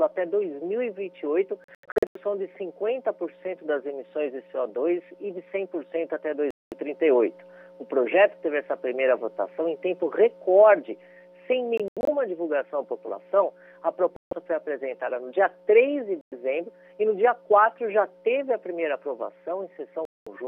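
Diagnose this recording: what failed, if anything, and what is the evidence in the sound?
The sound cuts to silence at 1.64, 6.51, 11.78, 14.16, 16.21 and 20.05 s. Gaps last 0.1 to 0.3 s; those at 1.64 and 11.78 s are clusters of short holes. Audio resumes further on each time. Likely a Bluetooth dropout: late packets were discarded on the wireless playback link.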